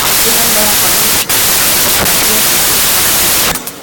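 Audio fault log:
Throughout: wrong sample width. Speech written as 16-bit integers is being read as packed 24-bit samples, so bytes from neighbouring samples merge into each value, giving loud noise over the buried speech, which runs 1.5 times too fast and correspondingly high in pitch.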